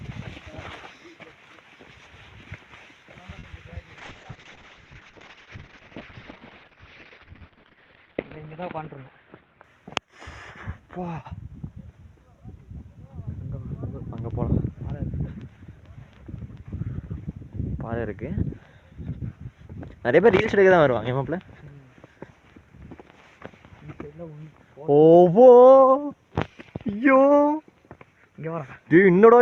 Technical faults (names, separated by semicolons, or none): short stall from a late packet; call bitrate drop